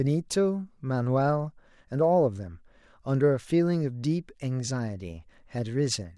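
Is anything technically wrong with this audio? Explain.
No, nothing technically wrong can be heard here.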